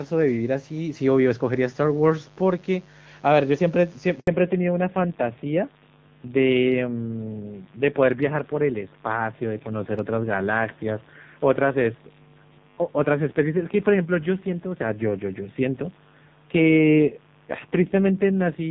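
A mains buzz runs under the speech from start to finish, roughly 30 dB below it. It is a raspy 50 Hz buzz with harmonics climbing into the kilohertz range, not a smooth hum, which points to switching spikes from a dimmer or rectifier rather than a simple earth loop.

At 4.2 s a handover gap cuts the speech for 80 ms, until 4.28 s. The sound fades within a few tens of milliseconds and stays fully silent, with no repeated or smeared audio filling the hole. That fits frames never arriving while the call switched networks, rather than a packet-loss concealment glitch.

From 4.28 s to the end, the call falls back to narrowband. Everything above 4 kHz disappears and the speech turns dull and rough. Before the switch, wideband HD Voice carried clean sound to about 7 kHz. The roughness afterwards points to a low-rate narrowband codec, not just a low-pass filter.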